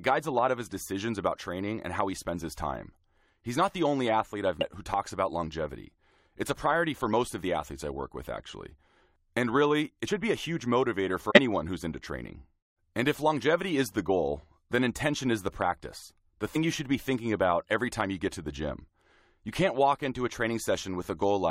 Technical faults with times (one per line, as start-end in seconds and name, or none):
4.61 compressed frames skipped
10.07 compressed frames skipped
11.30-11.39 compressed frames skipped
16.54 compressed frames skipped